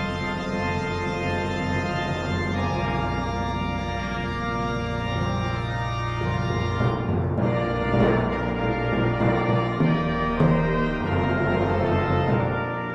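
No technical faults can be heard anywhere in the audio. Nothing in the sound calls for a timestamp or any further comment.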